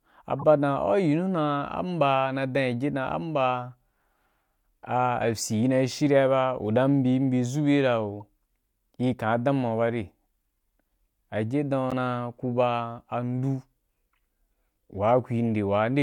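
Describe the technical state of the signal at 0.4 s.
A short, artificial blip cuts into the speech from 0.39 to 0.44 s, a burst of misplaced tonal noise lasting under 50 ms and peaking at roughly -20 dBFS. This is a corrupt frame decoded: flipped bits inside the compressed stream were passed to the decoder, which played about two damaged frames as if they were valid. Misread gains and spectral codes dropped energy into the wrong frequency bands for just that span.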